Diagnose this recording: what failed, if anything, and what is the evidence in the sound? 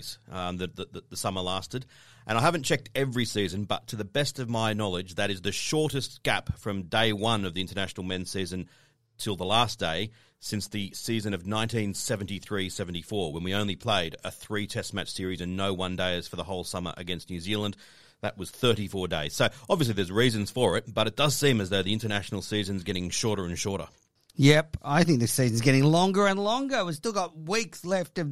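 Dropped samples at 3.91 s and 5.18 s: sharp clicks where the waveform jumps past under a millisecond, likely a driver or buffer glitch.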